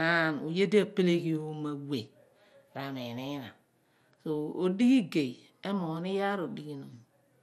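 From start to finish the speech carries MP2 compression damage that is plainly audible. Nothing survives above 14.4 kHz, and the remaining highs flicker as upper sub-bands drop in and out, with a gurgling, granular roughness from coarse quantisation. That points to MPEG Layer II at a low rate, likely around 80 kbps. A simple low-pass filter would sound dull but smooth; the band flicker and grit mark a starved codec.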